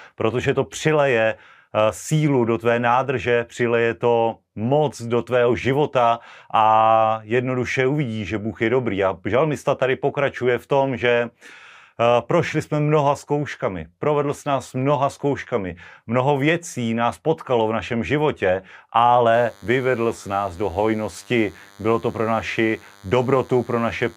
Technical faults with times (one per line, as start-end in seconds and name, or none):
19.34-24.17 DECT cordless phone buzz